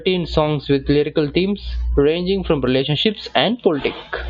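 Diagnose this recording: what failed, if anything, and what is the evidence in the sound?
Overlap between stream segments at 2.68 s in the speech: a tiny skip where a few milliseconds of audio drop out and the waveform jumps. At the playback stage, two segments' time stamps overlapped, and the player trimmed that span, removing real sound at a boundary consistent with 2-second segments.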